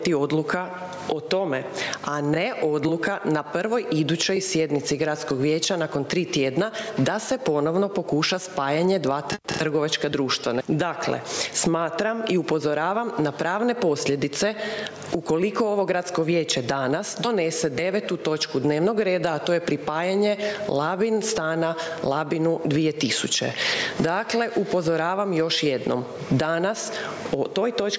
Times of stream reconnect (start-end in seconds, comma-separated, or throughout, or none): none